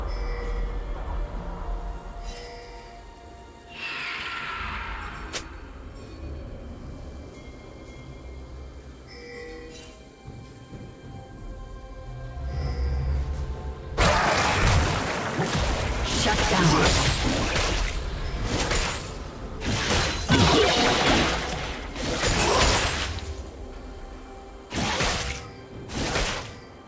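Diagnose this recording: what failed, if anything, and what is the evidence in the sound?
Nothing failed in this recording; the only limit heard is the call path's band edge, with nothing above 8 kHz, which fits a wideband call codec.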